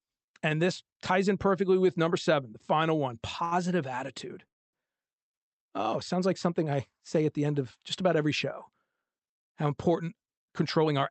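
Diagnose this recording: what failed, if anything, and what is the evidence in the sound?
Short stall from a late packet, network and jitter buffer. Just after "seven the final one", 3.44 to 3.55 s, a sound is held about 71 ms. Nothing is lost.

Call audio freeze at 4.48 to 4.84 s. The sound fades into roughly 250 ms of silence, then resumes unbroken. Delayed packets likely emptied the jitter buffer.

Jitter buffer speed-up from 9.66 to 10.92 s. The speech runs 9% fast at unchanged pitch. About a tenth of a second of pitch periods was cut to reduce delay.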